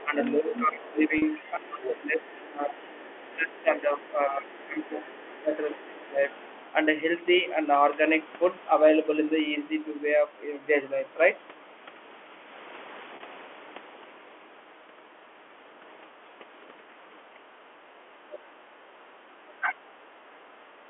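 From 0.0 to 2.87 s, the other side's voice leaks through. A second voice sits only about 5 dB under the main talker. It is likely the far end playing on a loudspeaker, with the echo canceller leaving much of it in the microphone signal. The leak returns as brief, faint scraps. At 6.41 to 6.59 s it is about 30 dB down. At 18.32 to 18.38 s it is about 20 dB down.

Over the same opening stretch, from 0.04 to 6.19 s, the talker's speech is suppressed in double talk. The voice sags and breaks up over roughly four seconds in total, dropping as far as about 20 dB. The likely cause is the canceller failing to tell the talker from the echo and turning both down. Short dips follow at 17.35 s, of about 5 dB, and 18.05 s, of about 10 dB. A longer one runs from 18.72 to 20.55 s, again reaching about 20 dB, with about a second of it affected.

At 1.18 s and 13.16 s there is packet loss with pitch repetition. 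Each gap lasts 40 ms, which fits two lost 20 ms packets. The receiver repeats the last pitch period to cover the hole. The gap is heard as a short, held, slightly buzzy tone before speech resumes. Under all of this, the G.711 telephone coding keeps the band within 300 Hz to 3.4 kHz.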